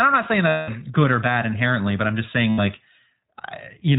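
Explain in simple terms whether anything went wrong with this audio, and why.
Two things went wrong. The whole recording passed through the iLBC codec, a narrowband phone codec that packs speech into 20 ms chunks and throws away everything above 4 kHz. That is why the voice sounds muffled, slightly rough and synthetic from start to finish.

There are also lost iLBC frames, from 0.48 to 0.70 s (about 200 ms) and from 2.50 to 2.60 s (about 80 ms). The decoder filled each gap by repeating the last bit of voice mixed with noise, heard as a brief held, buzzy vowel before normal speech resumes.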